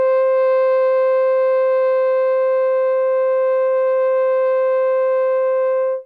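A short music excerpt with no technical fault to point to. Nothing in it calls for a timestamp or an explanation of a cause.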